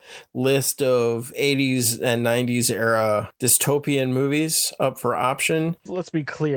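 Nothing in this stretch of speech stands out as a technical problem, so there's no fault to walk through here.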